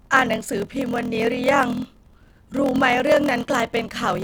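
Throughout, the speech has a block size mismatch (padded). Each block, which fits 1024 samples, is topped up with zeros to a larger size. The gaps cause a 41.7 Hz buzz and slow it to 0.889× at normal pitch. Waveform and spectrogram show silent slivers every 24 ms.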